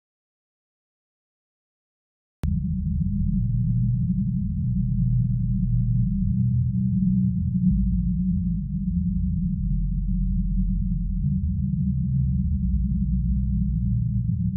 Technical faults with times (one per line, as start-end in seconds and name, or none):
0.00-2.44 audio dropout to silence